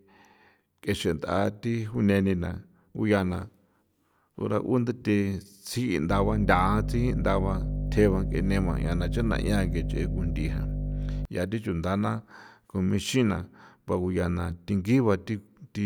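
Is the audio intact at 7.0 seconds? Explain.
No, mains hum runs from 6.10 to 11.25 s, so 7.0 s falls inside it. The power line is leaking into the signal path, as happens with a ground loop or a transformer sitting close to the cabling, and it rides along with the speech as a steady low 50 Hz drone with a few low harmonics above it. Here the hum is roughly as loud as the speech itself, so it competes openly rather than sitting in the background.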